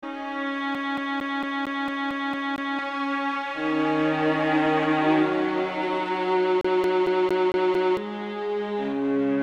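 A music clip with a CD stuck on one turn, twice: from 0.75 to 2.79 s and again from 6.61 to 7.97 s, the same 0.23 s slice repeats with a tiny mute at each jump, where a scratch knocks the laser back a track.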